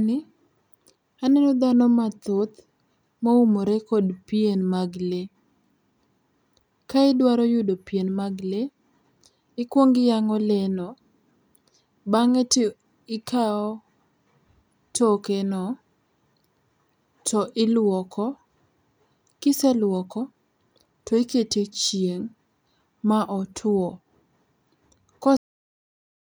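The final stretch of buffers never reached the output, so at 25.37 s the speech suffers a cut-off end: it stops mid-sound and drops straight to digital silence, with no natural decay, for the remaining second or so of the clip.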